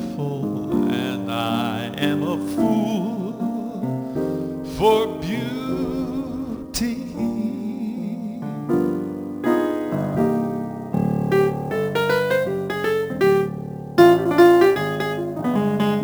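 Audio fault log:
Throughout: sample clock jitter. The converter's timing wanders by around 10 microseconds, so each sample lands slightly off its proper instant. Where the waveform moves steeply, that timing slip becomes an amplitude error roughly 25 dB below the signal, heard as a grainy hiss that swells with loud, bright passages and disappears in quiet. On a spectrogram, a broadband noise haze tracks the high-frequency energy and leaves silent gaps clean. The waveform looks intact.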